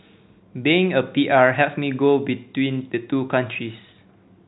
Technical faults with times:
none

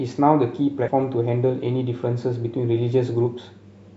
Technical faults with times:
0.88 damaged data in a compressed stream

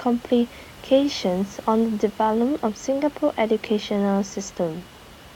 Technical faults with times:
none

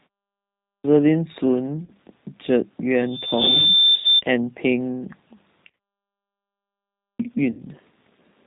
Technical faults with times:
0.00-8.46 G.729 codec
0.59-0.84 clipped start after a pause
1.85-1.92 VoIP packet loss concealed by the speech codec
2.96-4.22 loudspeaker feedback squeal
3.95-4.05 VoIP packet loss concealed by the speech codec
5.69-5.77 VoIP packet loss concealed by the speech codec
6.94-7.19 clipped start after a pause
7.51-7.63 VoIP packet loss concealed by the speech codec

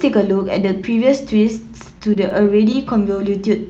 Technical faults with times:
1.99-2.86 repeated stalls (stutter)

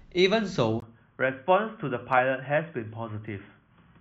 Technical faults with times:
0.80-4.00 input switched to a poorer device

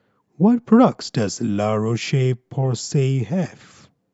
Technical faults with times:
none

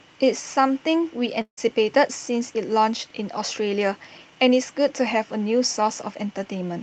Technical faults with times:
1.41-1.59 long network dropout

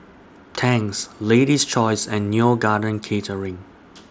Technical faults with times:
none

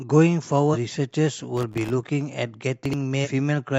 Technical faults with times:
0.70-0.77 damaged data in a compressed stream
1.57-1.93 processor overload crackle
2.85-2.93 chunks out of order
3.21-3.28 damaged data in a compressed stream

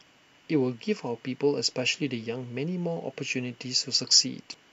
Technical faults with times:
4.51-4.54 damaged data in a compressed stream

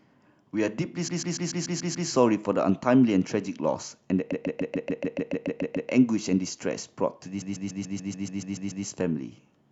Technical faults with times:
1.07-2.08 repeated frames
4.31-5.89 repeated frames
7.41-8.85 repeated frames

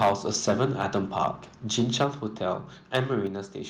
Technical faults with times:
0.00-1.26 microphone overload
1.78-2.05 microphone overload
2.04 microphone volume stepped down
2.95-3.00 microphone overload
3.27 microphone volume stepped down

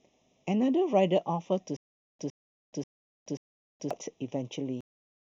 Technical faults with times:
0.00-5.22 channel delay (comb filtering)
1.77-3.91 stutter with silent gaps
4.81-5.22 cut-off end

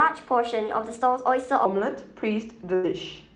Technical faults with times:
0.00-1.65 section at the wrong speed
2.75-2.85 burst of packet loss

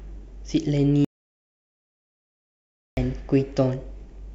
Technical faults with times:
1.05-2.97 audio dropout to silence

